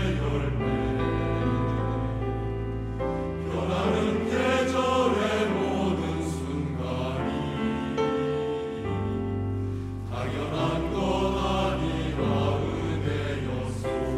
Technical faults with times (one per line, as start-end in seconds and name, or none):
none